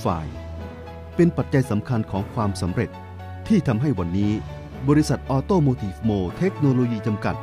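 The signal holds steady throughout, with no audible break, level jump or added disturbance at any point in the recording.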